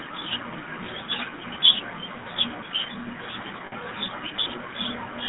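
From the start, the speech carries the coarse texture of the GSM full-rate codec. The band runs only from about 150 Hz to 3.7 kHz, and the voice has a plainly audible buzzy, gravelly grain, which fits the 13 kbps full-rate coder. The codec rebuilds speech from a vocal-tract filter driven by a sparse, regularly spaced pulse excitation, so fine harmonic detail is replaced by that rasp.

Between 3.66 and 3.73 s there are lost GSM frames covering about 60 ms, consistent with three 20 ms frames dropping out. Instead of a gap, the decoder reuses the parameters of the last good frame. The sound freezes into a brief rough, metallic ring and then continues normally. The loss is too short to fade fully to silence.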